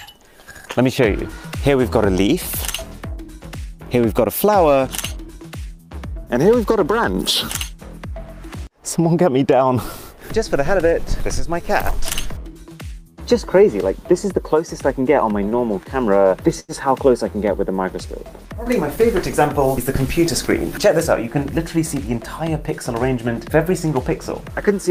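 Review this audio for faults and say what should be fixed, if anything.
Repeated stalls (stutter) from 15.49 to 16.72 s: seven brief holds, the longest 88 ms, as the jitter buffer ran dry and the last sound was stretched. Nothing is missing, unlike dropouts. To prevent it, enlarge or make the jitter buffer adaptive and steady the network path so packets arrive on time.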